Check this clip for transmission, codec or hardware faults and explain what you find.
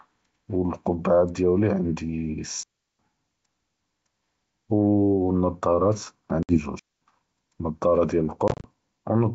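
Two kinds of fault appear, riding on G.722 wideband telephone coding at a rate consistent with 64 kbit/s, with faint or no coding damage.

Digital wireless dropout at 2.63 to 2.99 s (360 ms) and 6.79 to 7.01 s (220 ms): the receiver mutes after losing too much data. On the waveform and spectrogram these are clean near-silent gaps with very short fades and no noise bursts at the edges.

Packet loss on an ADPCM call at 6.43 to 6.58 s (60 ms lost) and 8.48 to 8.68 s (110 ms lost in runs of up to 30 ms, scattered over 160 ms): lost packets become silence, and the decoder's predictor and step size drift from the sender's. The waveform shows hard-edged holes. After each hole the speech comes back slightly distorted, which shows as smeared energy before it settles.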